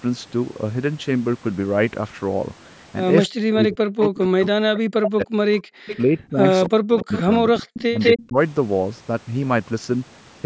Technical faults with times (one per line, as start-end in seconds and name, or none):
3.29-3.33 background gated by the echo canceller
3.55-5.37 speech suppressed in double talk
4.03-4.08 echo leak
5.60-5.96 echo leak
5.80-7.46 speech suppressed in double talk
6.98-7.22 echo leak
7.56-8.25 echo leak
7.91-8.37 speech suppressed in double talk